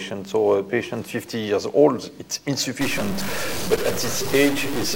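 From 2.81 s to the end, the audio picks up bit-error distortion, and the quieter stretches fill with a gritty noise floor. This points to a likely stuck bit, a single data bit held fixed so that roughly half the samples are offset by its weight, with errors flipping around small values. Between 3.72 and 3.78 s there is a brief glitch, typical of damaged data in a compressed stream: corrupted bytes make the decoder misread or drop frames and resynchronise at the next frame header.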